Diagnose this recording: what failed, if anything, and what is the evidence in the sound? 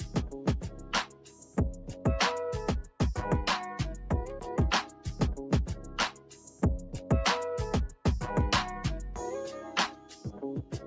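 Throughout the clip the level pumps and flutters, with sustained parts and tails sinking while attacks come through, swinging by around 10 dB. This is a noise suppressor applied to music or sounds in the call-processing stage. A suppressor built for speech was left on. It treats steady tones, ambience and reverb as background noise and keeps pulling them down. The call path's band limit, with nothing above 8 kHz, is normal and not a fault.

The clearest instances of sound cut by the noise suppressor fall at 0.00–0.16 s, 0.63–1.58 s, 1.81–2.05 s, 4.87–5.07 s, 6.12–6.62 s, 9.92–10.42 s and 10.64 s to the end. In each, held or decaying material drops by about 5 to 8 dB, deepest at 0.63–1.58 s, 6.12–6.62 s and the final stretch. The suppressor judged those passages to be noise and attenuated them harder than the surrounding sound.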